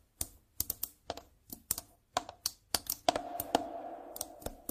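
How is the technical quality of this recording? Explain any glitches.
No glitches or technical faults can be heard anywhere here.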